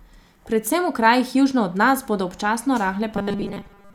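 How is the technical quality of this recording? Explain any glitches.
The recording has one glitch, right at the end: robotic sound from repeated short buffers, from 3.16 s to 3.94 s. Over that stretch the speech turns into a stiff, metallic buzz at a fixed 200 Hz, still loosely tracking the speech's rhythm. The likely cause is new audio arriving too slowly, so the software keeps looping a short chunk, about 5 ms, which fits the 200 Hz buzz, while most of the real audio, roughly two-thirds or more, is simply skipped.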